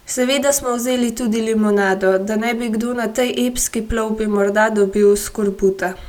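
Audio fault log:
No fault is heard in this speech clip.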